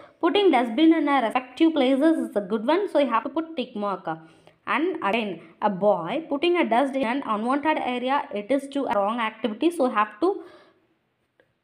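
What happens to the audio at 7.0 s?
At 7.03 s the sound jumps abruptly, with about a tenth of a second cut out and no gap. This is likely audio missing between chunks at a 2-second recording boundary.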